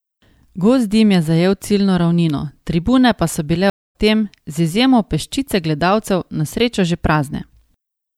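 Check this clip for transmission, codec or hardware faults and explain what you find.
There is one transmission fault, a stream reconnect, from 3.70 to 3.96 s, right after "tribune pa so bile". The connection dropped, so the player fell silent for about 245 ms, then reopened the stream and restarted its decoder mid-flow, easing in over the first frame. Playback resumes roughly a fifth of a second further on, so a short stretch of speech is skipped. That forward jump is what sets it apart from a plain dropout, which would pick up exactly where it stopped.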